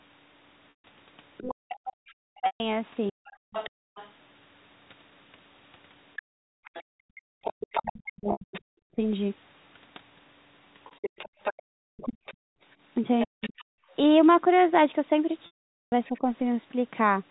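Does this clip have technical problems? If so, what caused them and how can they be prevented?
Yes. Packet loss with pitch repetition occurs at 0.7 s (140 ms), 2.46 s (140 ms), 8.32 s (80 ms), 13.64 s (140 ms) and 15.46 s (460 ms). In each gap the last pitch period repeats as a held buzz. On a spectrogram these look like frozen horizontal harmonics, and the longest, at 15.46 s, fades to silence. The gap lengths fit lost 20 ms packets. Prevention: use a larger adaptive jitter buffer, forward error correction or a more stable network path.

Speech is suppressed in double talk from 1.41 to 3.18 s and from 7.76 to 16.25 s. The talker dips by up to around 40 dB and sometimes drops out, which shows as notches in the waveform envelope. The likely cause is an echo canceller turning everything down during overlapping speech. Prevention: use a double-talk-aware echo canceller or a headset.

The other side's voice leaks through from 3.25 to 16.19 s at around 10 dB below the talker. 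It appears as a second set of harmonics on the spectrogram, likely because the echo cancellation did not fully remove the loudspeaker signal. Prevention: lower the loudspeaker volume or use a headset.

The background is gated by the echo canceller between 3.46 and 13.93 s. The room noise drops by about 40 dB at times, which shows as dark gaps in the noise floor. Prevention: use gentler suppression with comfort-noise filling.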